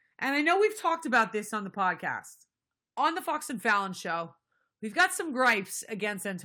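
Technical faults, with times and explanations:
No technical faults are present, so there are no times or explanations to give.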